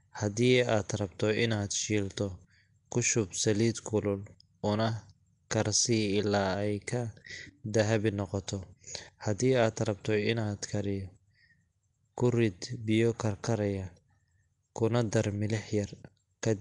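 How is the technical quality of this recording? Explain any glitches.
The technical quality is poor, with codec damage that is plainly audible for the whole length of the speech.

The most likely cause is Nellymoser compression, the old Flash microphone codec. It codes short blocks at a fixed, low bit depth, and weak bands get no bits at all and are filled with synthetic noise. The amount of damage fits a rate of around 44 kbps. Nothing is present above 10.6 kHz, and the speech carries a rough, hissy halo with a smeared, underwater colouring.

At 5.5 s there is a pre-echo. The transform coder spread the quantisation noise for a sharp attack across its whole block, so the noise meant for the loud onset also landed in the quiet instant just before it. The result is a brief hiss, about 12 ms long, leading into that attack, which sounds softened and smeared rather than crisp.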